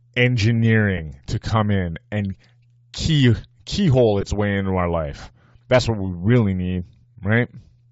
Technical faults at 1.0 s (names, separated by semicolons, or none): Bluetooth LC3 compression; lost LE Audio frames